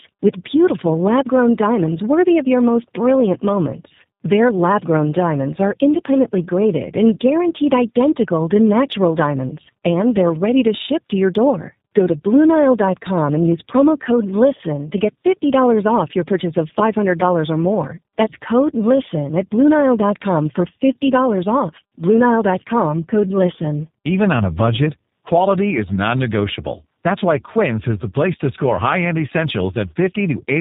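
From start to finish the speech sounds rough, muffled and warbly, with nothing above 3.8 kHz. This is tandem speech coding: the sound points to iLBC followed by G.729A, with G.711 between them. The second speech coder re-encodes the first one's already degraded output, compounding the damage.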